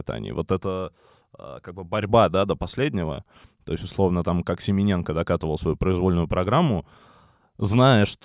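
No technical faults can be heard anywhere in this speech.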